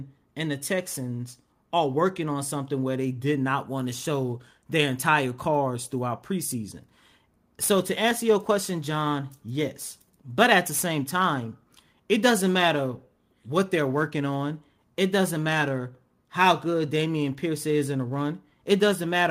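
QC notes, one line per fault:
No faults found in review.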